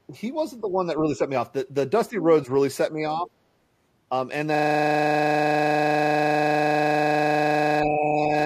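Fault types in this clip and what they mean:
Speech suppressed in double talk: the speech keeps dipping in short bursts, which is most likely an echo canceller ducking the near talker while the far side is also talking. You'll hear it at 0.07, 0.61, 1.03, 2.1, 2.91, 3.22 and 7.85 s. Most are mild dips of around 5 dB, a couple sink about 10 dB, and the one at 3.22 s drops roughly 15 dB. The 7.85 to 8.31 s stretch is the longest, about half a second.
System hang loop: from 4.55 s right to the end, a single 40 ms slice of audio repeats over and over, as if the machine or driver stalled while the sound hardware kept replaying the same buffer. Since the slice is so short, it cycles 25 times a second and fuses into a steady 25 Hz buzz rather than a stutter. The last dip at 7.85 s rides on top of this buzz.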